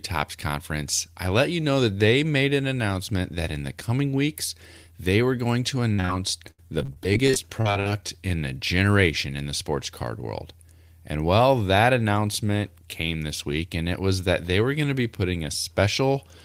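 At 5.93–5.99 s, just after "they were going to", a burst of packet loss drops about 50 ms. The receiver holds the last sound and fades it before the audio jumps ahead. Two short concealed packet losses follow, at 6.00–6.04 s and 6.05–6.10 s. Each hole of 30–40 ms is patched by extrapolation and heard as a brief smear or wobble. From 6.51 to 8.09 s, ending before "in the generation in", repeated packet loss produces robotic sound. Frequent gaps of up to 74 ms are patched in turn, about a quarter of the stretch, leaving it choppy.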